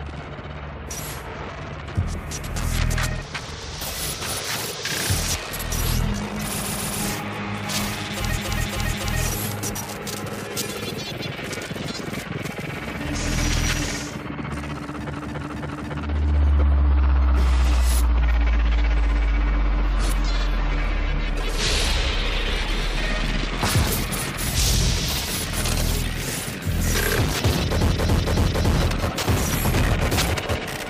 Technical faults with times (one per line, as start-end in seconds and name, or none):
6.57-6.99 repeated frames
8.34-9.17 repeated frames
15.12-15.95 repeated frames
27.89-28.72 repeated frames